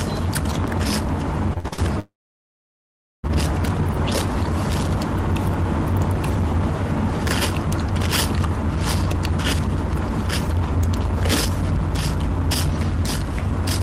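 From 1.53 to 1.80 s there is repeated packet loss, heard as choppy, robotic sound. Four short holes, the longest 59 ms, were each filled by stretching the preceding audio, so about 62% of that quarter-second is patched rather than real. On a spectrogram the span shows smeared, repeated horizontal bands with abrupt edges. The waveform looks like copied cycles with level steps where genuine audio briefly returns.

Shortly after, from 2.00 to 3.25 s, the sound cuts out for about 1.24 s, likely a long network dropout. It opens with a brief buzzy continuation of the last sound that fades within about a tenth of a second, then roughly 1.13 s of silence before the audio resumes with that stretch simply missing. The spectrogram shows a short smeared tail into a blank region, and the waveform flattens to near zero until the abrupt restart.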